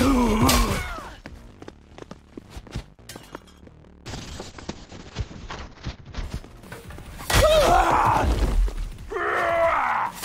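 At 4.06 s a call bitrate drop sets in and lasts until 6.29 s. The bandwidth estimate fell, and the encoder was forced onto far fewer bits. The sound points to a fall from about 96 kbps to roughly 7 kbps, held at its lowest for about 2.2 s. The coding turns coarse, and the top end is cut from 20 kHz to 8 kHz, so the audio goes dull and grainy. Full quality returns by 6.29 s.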